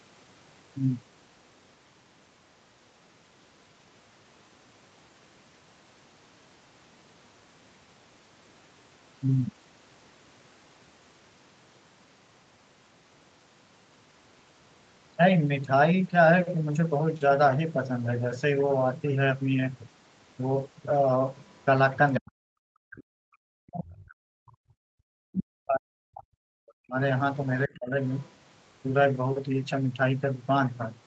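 A speech clip, band-limited to about 8 kHz, with trouble concentrated in its final ten seconds. The other side's voice leaking through appears at 21.37 to 21.64, 22.13 to 22.31, 25.33 to 25.44, 27.74 to 27.79 and 28.22 to 28.31 s. The first, fourth and fifth scraps are very faint. The second and third come close to the talker's own level. The likely cause is loudspeaker echo the canceller failed to remove. Speech suppressed in double talk follows at 22.2 to 23.21, 23.62 to 26.98 and 27.68 to 27.95 s. The talker's voice drops out in pieces, sometimes almost to silence, and the last dip is shallower. Likely the canceller turned down both voices while both sides talked at once.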